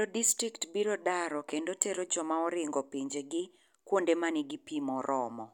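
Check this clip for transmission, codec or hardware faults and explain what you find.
One fault in this speech. At 3.10 s there's a block of digital silence about 2.67 ms long, which fits a 128-sample buffer left unfilled. The hard edges make it a quick tick.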